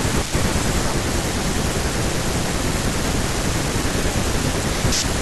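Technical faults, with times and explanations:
No technical faults detected in the speech recording.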